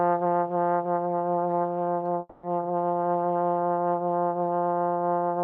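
At 2.19 s the audio gives way to a smeared continuation of the preceding sound, a buzzy tail that carries on for about 240 ms until 2.45 s, when the sound resumes with that stretch missing. This is most likely a long network dropout: the receiver kept extending the last sound it had while nothing arrived. On a spectrogram the gap shows as repeated, blurred copies of the earlier spectrum, and the waveform shows a periodic, slowly fading pattern before a discontinuous restart.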